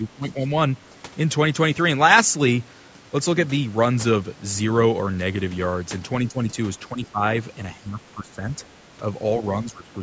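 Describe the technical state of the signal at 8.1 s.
At 8.1 s the speech dips sharply, falling by roughly 15 dB at its deepest. The dip sits inside a stretch from 7.75 to 8.39 s where about half a second of the talker's level is pulled down. This is likely speech suppressed in double talk: with both sides talking at once, the echo canceller could not tell this talker apart from the loudspeaker echo and attenuated everything it heard.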